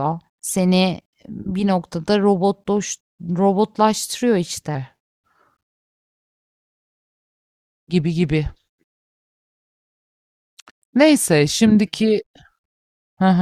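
From 4.75 s to the end, a section at the wrong speed: the speech suddenly runs at 0.893 times its original rate, so it turns slower and deeper together, dropping by about two semitones. This is likely playback or editing against a mismatched clock. Unlike a pitch shift, where the voice deepens but the timing holds, or a time-stretch, where pacing slows at unchanged pitch, here tempo and pitch fall in lockstep.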